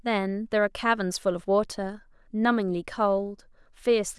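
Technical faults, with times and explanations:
No technical faults are audible; the speech signal holds steady and intact throughout.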